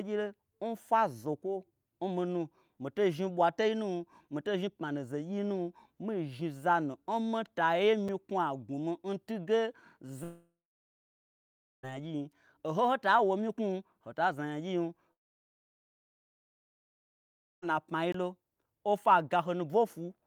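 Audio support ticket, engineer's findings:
Block of digital silence at 8.08 s and 18.12 s. Hard cut to silence and back. The first gap is about 5 ms and heard as a tick; the second is about 20 ms, a short hole. Cause: output buffer not filled in time, or invalid samples zeroed, in the audio render path.

Long network dropout, 10.23 to 11.85 s. 1.6 s of speech lost. A short fading buzz from the receiver's concealment, then about 1.3 s of silence. Audio resumes without the lost section. Likely packet loss in network transport.

Long network dropout, 15.13 to 17.64 s. 2.5 s of speech lost. Concealment fades almost at once, leaving silence for nearly the whole gap. Audio resumes later, with the missing part gone. Likely the same network-side loss as above.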